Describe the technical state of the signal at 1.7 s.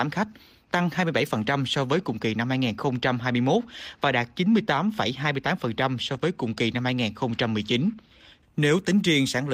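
At 1.7 s the speech signal is intact, with no audible technical fault at that moment.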